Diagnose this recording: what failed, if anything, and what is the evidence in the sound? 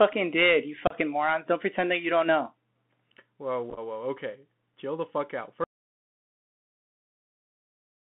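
Codec stage: the Bluetooth CVSD headset codec confines the speech to about 150 Hz to 3.5 kHz, with scratchy sibilants and a granular hiss. A plain telephone band would not add that slope-overload grit.

Network stage: unconcealed Bluetooth headset packet loss leaves abrupt holes at 0.87 to 0.95 s (30 ms lost) and scattered across 3.70 to 3.79 s, with runs of no more than 7.5 ms. They are too brief and fragmented to be dropouts.

Driver or link stage: an audio dropout to silence from 5.64 s to the end leaves silence with no room tone, likely from a lost headset connection. It differs from packet loss because it is long and never recovers.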